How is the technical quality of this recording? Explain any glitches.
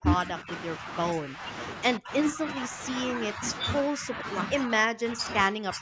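The speech is repeatedly pushed down in level, most likely speech suppressed in double talk, and the sound is limited to about 8 kHz by call microphone processing. The dips fall at 0.0–1.44 s, 1.98–2.79 s, 3.33–3.43 s, 3.91–4.09 s and 4.49–5.81 s. An echo canceller facing simultaneous talk attenuated the near talker along with the echo. The drops range from about 5 dB to about 40 dB, deepest in the final stretch, where the speech nearly cuts out.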